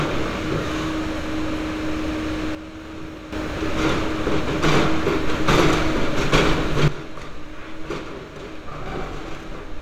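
At 2.55 s the whole sound drops by about 10 dB in one step, background noise included. It stays down until 3.33 s, then snaps back. At 6.88 s it falls again, by about 12 dB, and stays low to the end. These are sudden gain jumps. The likely cause is a digital gain change applied from one sample to the next, with no ramp to smooth it.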